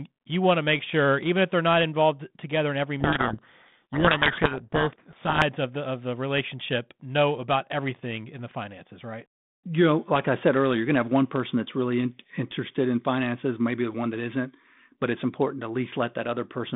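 A speech recording over a telephone-band line, roughly 150 Hz to 3.6 kHz, with the light coding texture of G.726 ADPCM at a rate that fits 32 kbit/s. From 3.00 to 5.43 s the speech is buried under harsh, grinding distortion. That is a codec payload misread: the decoder unpacks each G.726 code word with its bits in the wrong order, so every sample's difference value is wrong and the adaptive prediction is thrown off until the packing matches again.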